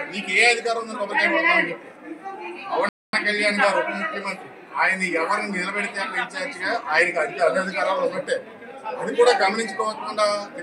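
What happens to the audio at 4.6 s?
Nothing goes wrong at 4.6 s; the audio plays through that moment intact, with no dropout, click, glitch or other fault.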